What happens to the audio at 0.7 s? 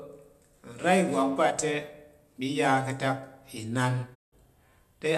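Nothing goes wrong at 0.7 s; the speech continues cleanly there with no dropout, click, distortion or other fault.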